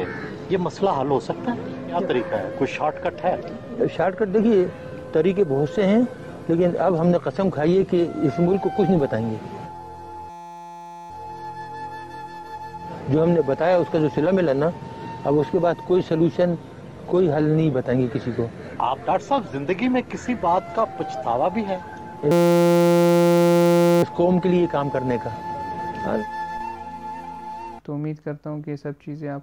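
A system hang loop occurs from 10.30 to 11.10 s and from 22.31 to 24.03 s. The stalled system's hardware repeats a 5.8 ms buffer, consistent with 256 samples, producing a steady 172 Hz buzz.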